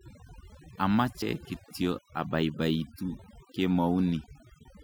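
Damaged data in a compressed stream at 1.21 s in this speech recording causes a brief blip: the decoder reaches corrupted bytes, misreads the frame there, loses sync and searches for the next valid frame header before playback resumes. Overdone noise removal runs throughout: an overly aggressive noise reducer pushes individual frequency bands down or out whenever they sit near its noise estimate, leaving near silence with twinkling specks and a voice stripped of its quieter components.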